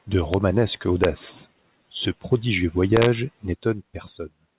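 At 0.34 s, 1.04 s and from 2.97 to 3.06 s, integer overflow cracks through loud peaks. Levels pushed about 0 to 1 dB past full scale wrap to the opposite sign instead of limiting. Each crack sounds harsher than clipping, over narrowband audio cut off at 4 kHz.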